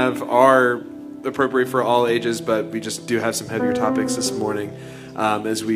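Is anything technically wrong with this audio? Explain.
No, nothing here sounds technically wrong; it's a fine-sounding bit of audio with nothing that stands out as a problem.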